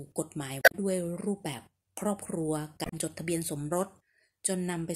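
At 0.59 to 0.75 s and again at 2.82 to 2.93 s the speech is disrupted by damaged data in the compressed stream: corrupted frames are misdecoded, and the decoder loses sync until it finds the next valid frame header.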